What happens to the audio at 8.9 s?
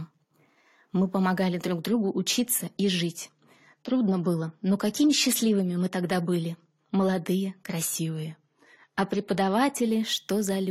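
At 8.9 s the speech is near the end of a drop in speed and pitch. From 7.96 s to 8.93 s it plays 5.6% slower and about one semitone flat, then snaps back. This is likely a drift correction step, where clock-matching software briefly changed the playback rate to rebalance its buffer.

An adaptive stream at a lower bitrate also covers this moment. From 1.81 s, just after "помогали друг", to 9.87 s, the audio switches abruptly to a coarser encoding. Nothing is left above 14 kHz, and artefacts rise. That fits a drop from about 96 to 32 kbit/s AAC.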